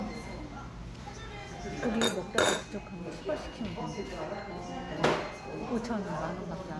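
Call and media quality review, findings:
Nothing to flag on this one; I listened through and couldn't pick out any technical problem anywhere in the audio.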